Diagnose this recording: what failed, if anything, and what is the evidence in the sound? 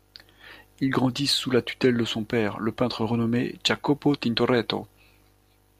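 Nothing in the sound points to a failure at any stage of the chain. The speech carries no event that would call for a diagnosis.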